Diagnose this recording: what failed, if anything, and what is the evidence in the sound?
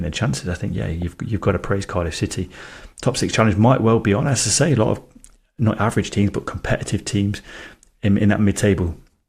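DAB burbling, at the codec stage. From 1.02 to 1.14 s, between "chances I think yeah" and "you've got to praise", 8 frames are hit and the speech is broken by short blips of noise. Weak reception let bit errors past correction into the MP2 data. Corrupted samples put blips of noise in single sub-bands.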